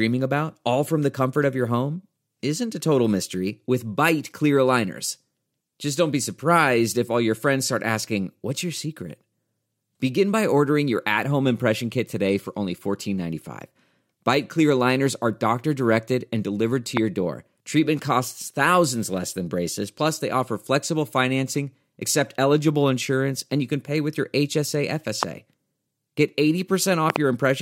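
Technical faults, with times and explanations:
16.97–27.18 s, loud pop: four sharp pops sit on top of the speech at 16.97–16.99 s, 25.23–25.25 s, and 27.10–27.18 s, where two arrive in quick succession. Each peaks roughly 20 dB above the surrounding level, and the speech carries on underneath without a gap. The likely cause is a sudden voltage step or pulse, from a plug, switch, static discharge or driver glitch, that the downstream circuits rounded into a thump. That uninterrupted speech separates these pops from dropouts, and their size and body separate them from small digital clicks.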